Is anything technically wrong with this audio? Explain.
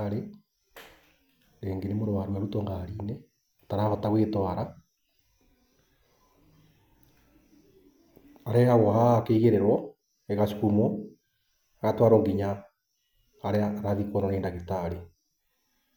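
No, nothing technically wrong stood out on listening to this speech clip.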